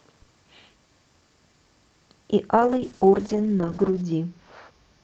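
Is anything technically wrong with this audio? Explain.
Yes. At 2.56 s there is a call bitrate drop that lasts to the end of the clip. The bandwidth estimate on the call fell, so the encoder was forced to spend far fewer bits on each stretch of speech. The texture fits a fall from about 48 kbps to roughly 7 kbps, held at its lowest for about 1.46 s. The speech turns coarse and watery, loses its upper frequencies, and never recovers before the audio ends.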